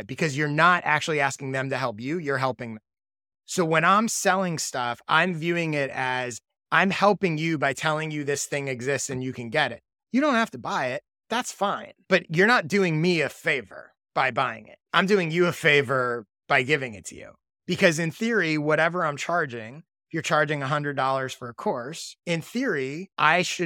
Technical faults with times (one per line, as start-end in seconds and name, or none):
none